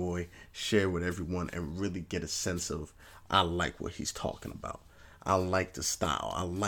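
A speech recording, and nothing is technically wrong with it.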